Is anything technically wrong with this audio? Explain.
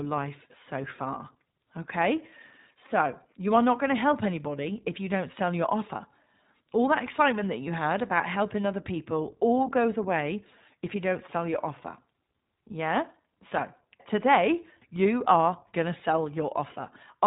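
Yes. Throughout, the speech carries iLBC codec damage: each short frame is coded independently, cutting everything above 3.8 kHz and leaving a rough, synthetic edge. This fits 20 ms frames at 15.2 kbps, and the grain sets it apart from a clean low-pass filter.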